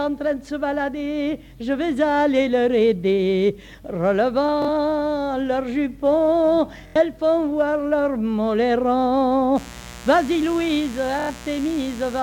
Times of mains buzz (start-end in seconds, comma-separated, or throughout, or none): 9.54-12.22